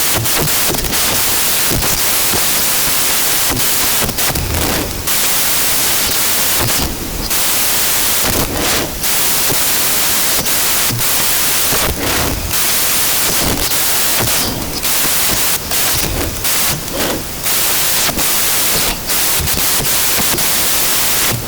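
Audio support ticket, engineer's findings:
Samples built from the wrong bytes, throughout. Loud white noise over the speech. Decoder byte order or alignment off, so the noisy low bits land in the high part of each value.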